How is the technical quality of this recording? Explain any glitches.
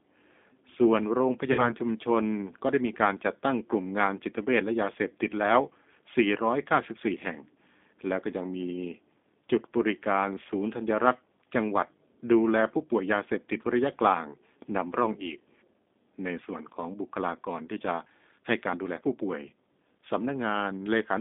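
Technical quality is on the rough side. There's plainly audible low-bitrate codec coloring the whole way through, plus one short dropout near the start.

The G.729 codec damage runs end to end. At 8 kbit/s the voice is rebuilt from a vocal-tract filter, a pitch predictor and a handful of pulses per frame rather than sent as a waveform, so it comes out slightly grainy and synthetic. The band is squeezed to roughly 200 Hz to 3.6 kHz, which gives it that thin, boxy telephone sound with no air on top.

Then there's VoIP packet loss concealed by the speech codec, from about 1.52 to 1.75 s. Around 60 ms of audio went missing, which fits a couple of lost packets. The decoder filled the hole by stretching its last pitch and filter state and fading the gain, so you hear a brief buzzy tone or coloured noise that dies away. Since each frame leans on the previous one, the voice stays a bit weak and distorted for a while after the audio resumes, which is why the disturbance runs well past the 60 ms gap.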